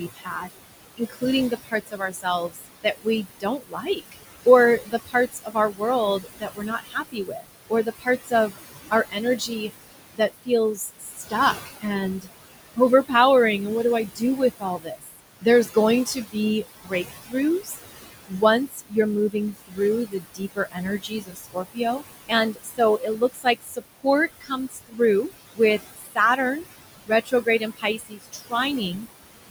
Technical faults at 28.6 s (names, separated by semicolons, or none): noise suppressor artifacts; speech cut by the noise suppressor